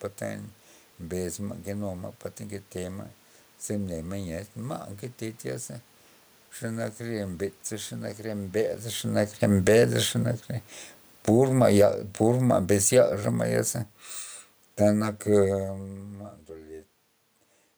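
From 11.14 to 13.21 s the automatic gain falls by about 5 dB. The room noise sinks along with the speech, which separates it from a talker moving away, where the background stays steady.

From 14.22 s, just after "ma'ya ze", to the end, channel delay causes comb filtering. One channel lags by roughly 10 ms, and the mono sum carves fixed notches from around 50 Hz upward. The result is a hollow, phasey tone rather than a simple level change.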